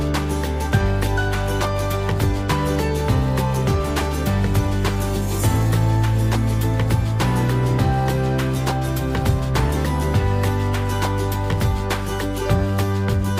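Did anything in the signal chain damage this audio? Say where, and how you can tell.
No, nothing in the signal chain can be heard damaging this audio; the signal keeps its continuity and timing throughout.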